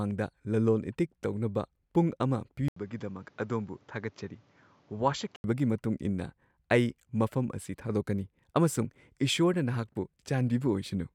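Right after "ꯇꯧꯅꯕ ꯄꯨꯡ ꯑꯃ", at 2.68 s, there's an 80 ms gap, then the speech goes duller, nothing above 7.6 kHz, a bit quieter, with a faint new noise floor. That's likely the input switched to a poorer device, and it switches back at 5.44 s.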